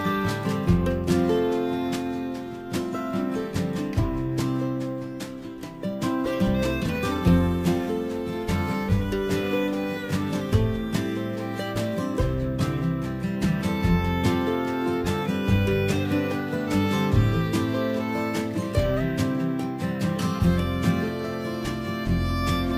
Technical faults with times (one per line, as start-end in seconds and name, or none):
0.00-22.78 crude rate conversion